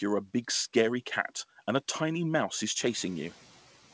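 From 2.8 to 3.08 s, after "a tiny mouse is", the noise suppressor is catching up. The background noise rises by about 12 dB near 3 s, and the suppressor's noise estimate lags, so the noise comes through briefly before sinking by about 5 dB over 280 ms. On a spectrogram, a brighter noise floor fades back, with nothing above 8 kHz, which fits a G.722 call path.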